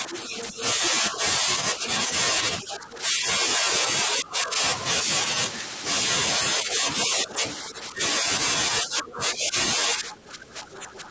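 An echo canceller, likely struggling to separate the near talker from the loudspeaker's copy of the far end while both sides spoke at once, pulls the speech down as well as the echo. This is speech suppressed in double talk. It happens from 0.0 to 2.1 s, 2.62 to 4.61 s, 6.38 to 8.25 s and 8.82 to 11.11 s. The speech dips in patches, by about 5 dB at first, then about 10 dB, and about 15 dB in the last two stretches. The ducking grows deeper as the call goes on. The same canceller also fails to strip all of the far end from the microphone, likely because residual loudspeaker pickup survives its filtering. As a result, the other side's voice leaks through at 0.14 to 0.68 s and 2.64 to 2.98 s. These are brief scraps sitting roughly 15 dB under the speech, inside a band that stops at 8 kHz.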